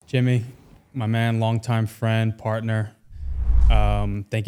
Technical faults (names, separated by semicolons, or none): none